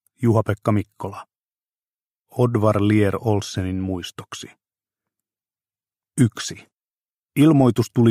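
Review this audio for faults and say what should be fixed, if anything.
No faults; nothing needs fixing.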